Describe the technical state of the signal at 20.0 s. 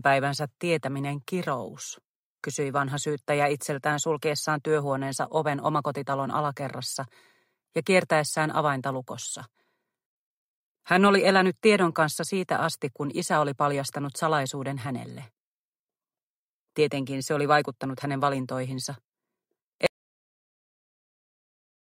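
At 20.0 s the sound has dropped to silence, with no room tone at all, from a clean cut at 19.86 s that runs to the end. This audio dropout to silence likely comes from the input being lost, a disconnected device or a stray mute, while recording continued writing silence.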